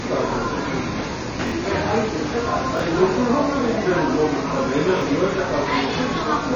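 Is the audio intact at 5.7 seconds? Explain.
No, not at 5.7 s. Everything above about 6.9 kHz is gone, and the sound has a dull, smeared, fizzy texture, here and throughout. That's likely AAC compression at a low bitrate, around 24 kbps, cutting the top band and coarsely quantising the rest.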